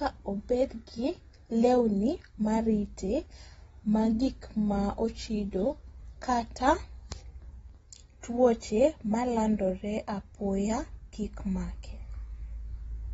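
From start to finish the speech sounds dull and smeared, with nothing at all above 7.7 kHz and a watery, warbling texture on sustained sounds and sibilants. That points to AAC compression, likely AAC-LC at a low rate, fitting something like 24 kbps. The encoder doesn't have enough bits, so it throws away the top of the spectrum and quantises the remaining bands coarsely. The damage is plainly audible throughout.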